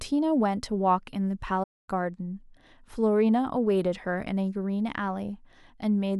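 At 1.63 s the speech cuts out abruptly into silence and does not return until about 1.89 s, a gap of roughly a quarter of a second. This is a playback stall, likely caused by the player running short of data or its thread being briefly blocked.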